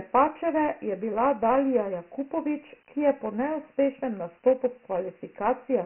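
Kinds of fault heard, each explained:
Dialogic VOX ADPCM: The speech was stored as 4-bit adaptive differential codes rather than full samples, at a rate of 24 kbps, which fits the 6,000-samples-per-second variant. That rate leaves nothing above 3 kHz, so the top of the telephone band is cut off and the voice sounds dull and boxed in. The coarse 4-bit steps cause heavy damage, heard as a gritty hiss that rides along with the speech and follows its loudness.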